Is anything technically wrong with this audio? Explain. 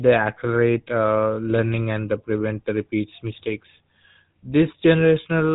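Yes. The speech carries GSM full-rate codec damage from start to finish. The codec rebuilds the voice from a model of the vocal tract. It drives that model with evenly spaced pulses and discards two of every three excitation samples. The result is a plainly audible buzzy, gravelly roughness on the speech. Nothing comes through above 3.8 kHz, so the sound is dull and narrow. All of this fits the 13 kbit/s GSM full-rate format.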